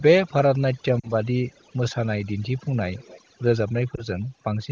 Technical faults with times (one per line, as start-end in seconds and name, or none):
0.00-4.71 overdone noise removal
1.00-1.10 lost AMR speech frames
2.97-3.21 echo leak
3.95-4.03 lost AMR speech frames